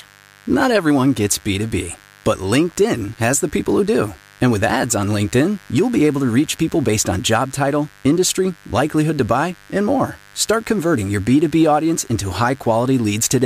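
Speech with mains buzz under it the whole way through: a steady raspy buzz built on 50 Hz harmonics, sitting roughly 30 dB below the voice.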